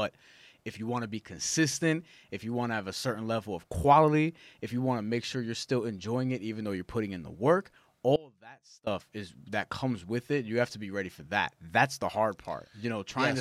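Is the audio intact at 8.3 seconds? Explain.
No. An audio dropout to a faint residue runs from 8.16 to 8.87 s, after "putting in the work", likely from the signal path briefly losing its source. The speech cuts abruptly to a faint leak about 25 dB down, visible as a sharp-edged, near-empty band on the waveform and spectrogram until "is that comes with".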